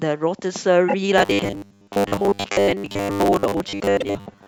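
At 0.88 s, repeated frames: a 24 ms block plays twice more, a quick stutter that adds 48 ms and then resumes, unlike a dropout's gap. From 1.18 s to the end, robotic sound from repeated short buffers gives a rigid 100 Hz metallic buzz, likely from 10 ms buffers repeated across most of the audio, unlike a stutter's distinct jumps. At 4.00 s, a 48 ms stretch repeats once.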